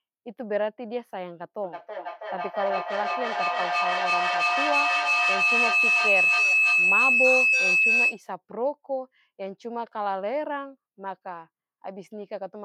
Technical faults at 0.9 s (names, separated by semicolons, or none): none